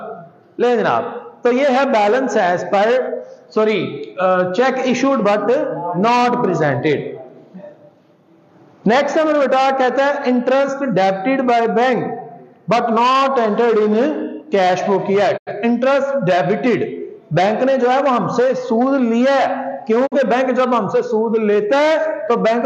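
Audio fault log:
15.36 to 15.52 s and 20.06 to 20.17 s, digital broadcast dropout: the sound fades to silence over about 20 ms, leaves a brief hole, then resumes further along in the programme. The material that should have filled each gap is simply missing. The receiver stopped getting decodable data, either because the signal was lost or because frames failed their checks, and it muted until valid frames returned. The missing stretches of about 85 ms and 43 ms fit two lost frames and then one.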